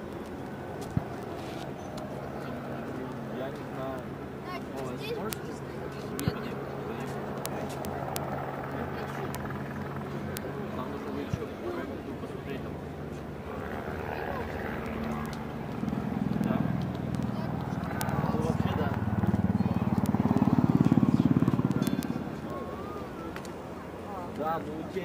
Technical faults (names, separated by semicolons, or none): word clock ticks